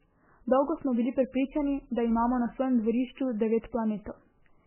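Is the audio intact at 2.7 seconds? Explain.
No. The damage at 2.7 seconds runs through the whole speech clip and is likely MP3 compression at a very low bitrate, around 8 kbps judging by the sound. Starved of bits, the encoder removes everything above 3.1 kHz and drops weak detail frame by frame. The result is dull, watery, swirling speech with smeared consonants.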